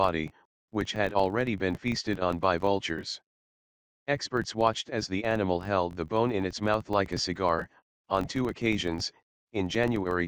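A filter restarted on every block runs throughout the audio, producing a steady 46.9 Hz buzz whose strength follows the signal level, which fits a 1024-sample block size.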